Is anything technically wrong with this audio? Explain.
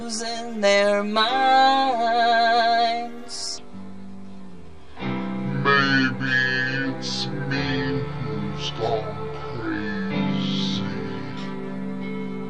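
Yes, there are two problems. Throughout, there's channel delay with comb filtering: one channel lags by about 10 ms, and in mono the cancellations start around 50 Hz and repeat, leaving things hollow and phasey. From 3.58 s to the end there's a section at the wrong speed. It runs at 0.623 times normal, about seven semitones lower and noticeably slowed, likely from being played against the wrong clock.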